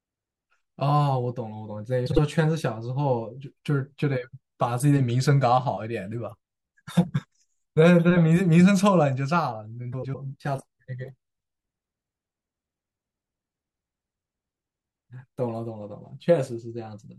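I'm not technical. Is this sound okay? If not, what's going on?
No. The speech has frames out of order twice, at 2.06–2.19 s and at 9.92–10.15 s. Two short chunks of audio play in swapped order, causing a brief garbled flutter. Unlike a dropout, nothing goes missing and no time is lost.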